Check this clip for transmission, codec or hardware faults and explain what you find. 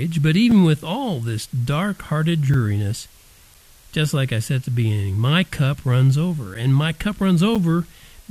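Two faults are present: a constant hiss from low bit depth with dither, and five short silent holes from gaps between stream segments.

Low bit depth with dither runs through the whole clip. The speech appears to be quantised to only about 8 bits, with dither added before rounding, so the rounding error becomes even white noise rather than distortion. It sounds like a steady hiss roughly 30 dB below the speech. On a spectrogram it forms a flat, uniform floor across all frequencies, visible in the pauses too. On the waveform it shows as fine fuzz where silence should be.

Gaps between stream segments occur at 0.51 s, just before "with all this dark", and at 2.54 s, 3.54 s, 6.54 s (right after "my cup runs over") and 7.55 s (after "my cup"). Each lasts about 4 to 9 ms. They fall on a 1 s grid because the time stamps of consecutive segments leave a small hole, which the player fills with silence. 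Nothing is lost; time is inserted. They are heard as brief dropouts. On the waveform they are flat silent stretches with abrupt edges. On a spectrogram they are thin vertical blank stripes.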